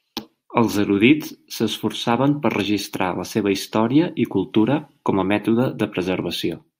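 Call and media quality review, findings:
Nothing stood out on listening to the speech in this clip.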